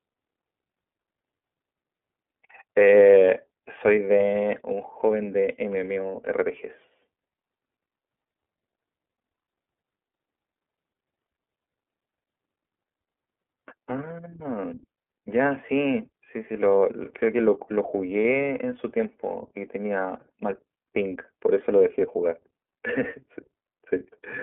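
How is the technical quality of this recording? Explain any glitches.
Quality is limited by narrowband coding for the whole clip. The iLBC codec cuts everything above 3.7 kHz and codes each 30 ms block independently, consistent with its 13.33 kbps mode, leaving speech audibly rough and synthetic-sounding.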